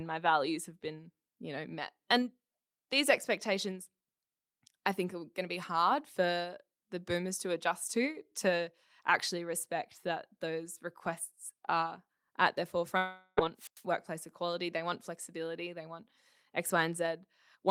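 At 12.97 s, right after "requests are at their", the sound turns into a smeared buzz that fades over about 0.4 s, until 13.39 s. This is most likely a long network dropout: packets stopped arriving, and the receiver stretched the last sound to fill the whole gap, so nothing goes fully silent but roughly 0.4 s of the original is lost. On a spectrogram the harmonics flatten into horizontal streaks that dim steadily. The waveform shows a repetitive, decaying pattern.

From 13.57 to 13.83 s, a wireless microphone squelch dropout follows. As the FM radio link weakens, hiss swells, and then the receiver's squelch cuts the output for about 98 ms before the signal returns with "workplace equality they want". On a spectrogram a broadband wash of noise appears and then a blank vertical gap. In the waveform the trace collapses to a flat line for that tenth of a second.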